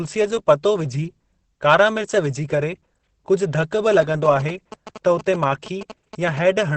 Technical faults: Opus compression; GSM signalling bursts

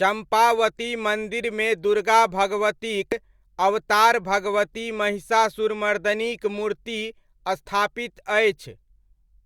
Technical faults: damaged data in a compressed stream

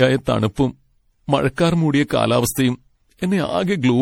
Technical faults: generation loss

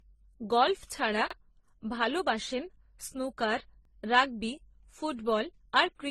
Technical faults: transcoding between lossy codecs; overlapping chunks

